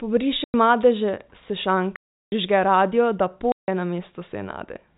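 Packet loss filled with silence cuts the speech at 0.44–0.54 s, 1.96–2.32 s and 3.52–3.68 s, gaps of 100, 360 and 160 ms that fit 20 ms packets. The receiver substituted digital silence, so each hole has hard edges, over band-limited G.711 telephone audio.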